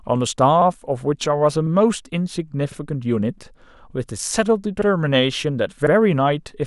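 Overlapping chunks cause a brief stutter at 0.62, 1.67, 2.72, 3.77, 4.82 and 5.87 s. Each 1 s block starts 50 ms early, so that slice of speech plays twice. A spectrogram shows repeated vertical seams about 1.05 s apart, and the waveform shows duplicated cycles.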